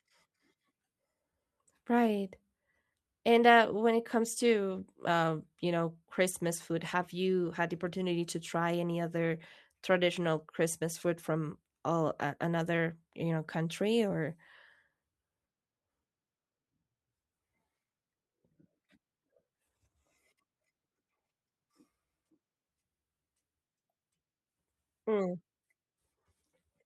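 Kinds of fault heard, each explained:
Lost packet rebuilt from error correction: at 4.71–4.77 s and 7.45 s, missing audio is filled from a low-bitrate copy in the next packet, briefly rougher and noisier, with no gap.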